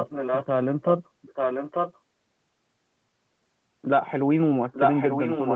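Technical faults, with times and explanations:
0.00–0.46, 1.22–1.99 and 4.72–5.56 s, echo leak: the speech comes back about 0.89 s late and only a little quieter, likely a loudspeaker echo that the canceller missed.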